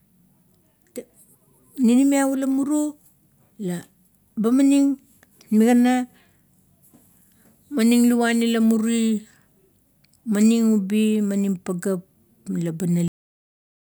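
The final buffers of this speech recording were never written or played out, which produces a cut-off end at 13.08 s. Instead of finishing naturally, the talker's sound is severed mid-utterance and the signal falls straight to digital silence, with no decay or room tail following it. That dead silence fills the remaining 0.8 s of the file, so the ending sounds chopped off rather than faded or completed.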